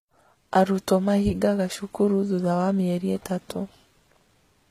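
Throughout the speech the sound has the dulled, coarse quality of heavy compression, even though the file is likely low-bitrate audio saved at a high bitrate: an earlier very lean encode, consistent with HE-AAC near 20 kbit/s, later re-saved as MP3 at a generous rate. The second pass cannot restore what the first discarded. On a spectrogram the content stops flat at about 14.9 kHz, with an empty band above it, and the damage left by the first encode remains.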